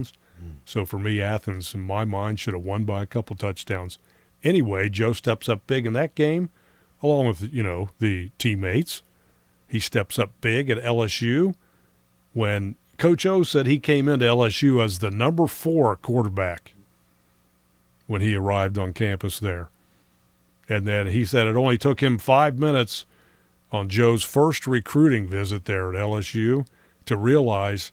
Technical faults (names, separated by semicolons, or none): none